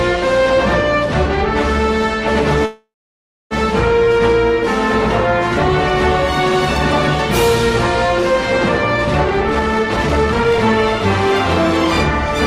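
Call audio freeze, 2.65 to 3.54 s: the sound stops and is carried on as a fading buzz or hiss, then about 0.63 s of silence, before resuming exactly where it left off. Nothing is lost, but the 0.85 s gap likely comes from delayed packets draining the jitter buffer.

Jitter buffer speed-up, 9.50 to 10.59 s: the receiver, holding too much buffered audio, repeatedly cut out short pitch-period slices, shedding roughly 0.7 s. Playback runs at about 163% speed with unchanged pitch, so this stretch sounds noticeably hurried.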